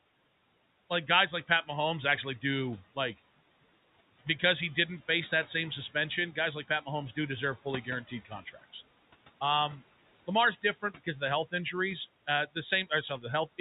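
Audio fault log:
throughout, noise suppressor artifacts: room noise pulled down about 17 dB between phrases and rising under speech; the spectrogram shows a pumping, speckled noise floor.
8.08–8.75 s and 10.62–11.22 s, speech cut by the noise suppressor: quiet speech taken for noise and dipped about 13 dB, then 15 dB, sounding swallowed; the waveform shows envelope notches and the spectrogram shows faded consonant energy.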